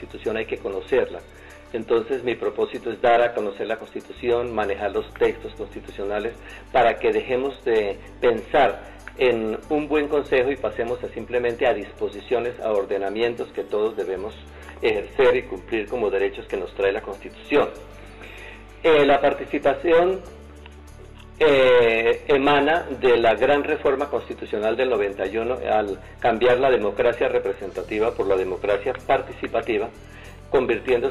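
No technical faults can be heard anywhere here.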